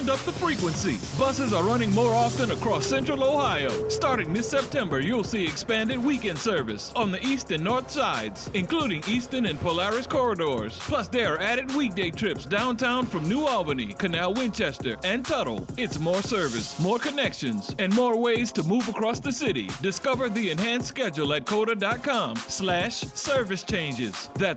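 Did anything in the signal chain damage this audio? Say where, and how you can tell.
No, nothing in the chain damaged it.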